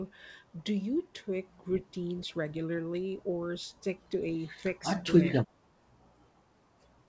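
From 4.8 to 4.92 s the speech dips slightly, then from 5.09 to 5.61 s it drops far more deeply, by about 25 dB at worst, fading in and out in chunks. This is most likely speech suppressed in double talk: the echo canceller treated overlapping far-end sound as echo and turned the near talker down. Throughout, the band stops near 8 kHz.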